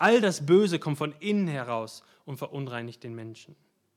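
From 0.03 to 0.09 s the opening peaks have flattened tops and a harsh, crackling edge, which points to microphone overload: input gain likely set about 4 dB above what the converter could take, so a small fraction of the samples were clipped.

At 1.02 s, just before "innen heraus und", the voice and the background both drop by about 4 dB in a single step. That is the microphone volume stepped down, with the call software likely cutting the device's input gain after detecting the earlier clipping.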